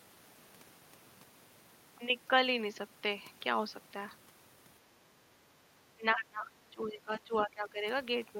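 From 5.95 to 7.85 s the speech is suppressed in double talk. The level dips by around 20 dB at worst, over about one and a half seconds in total, likely because an echo canceller mistook overlapping talk for echo. The waveform shows shrunken stretches, and the spectrogram shows energy fading across bands.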